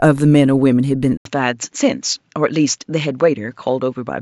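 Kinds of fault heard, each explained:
Input switched to a poorer device: at 1.17 s there is a silence of 80 ms, after which the speech continues to the end with nothing above 7.6 kHz, so it sounds duller and more boxed-in than before. Loudness stays about the same, but a faint new background noise sits far beneath the speech. This sudden shift in tone and noise at a single instant is likely the input switching to a different, narrower-band microphone mid-recording.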